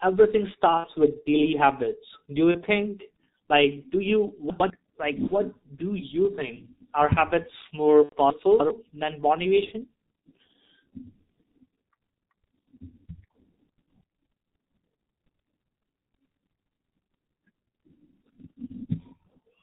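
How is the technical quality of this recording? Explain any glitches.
The recording is rough: the whole thing runs through a heavy G.723.1 codec, and there are five dropouts patched over by packet loss concealment plus two spots where chunks play out of order.

G.723.1 codec, throughout: the speech is muffled and hoarse, with smeared consonants. It's an old internet-telephony codec working in 30 ms frames, and the thin, band-limited sound fits its low-rate mode of about 6.3 kbit/s. Nothing above 4 kHz gets through, and because the voice model only updates slowly, fast transitions blur together.

VoIP packet loss concealed by the speech codec, at 0.77–0.86 s (just before "with daily habits"), 2.51–2.63 s, 5.27–5.38 s (just before "do you think"), 8.03–8.16 s and 9.65–9.71 s: the voice briefly turns into a buzzy, stretched tone or coloured noise that fades out. Packets went missing, so the decoder kept extending its last pitch and filter settings while ramping the gain down. 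The gaps fit about 60, 30, 30, 90 and 30 ms of lost audio. Each frame is built on the previous one, so the voice stays weak and a bit distorted for a moment after real audio comes back.

Chunks out of order, at 4.5–4.7 s (right after "like do you") and 8.3–8.7 s: you get a quick garbled, jumbled stretch. A block of audio that fits about 100 ms arrived late and got played after the material that should follow it. Nothing is missing, but the sequence is scrambled, with hard splices at the joins. The second spot is longer because that block landed roughly three chunks late.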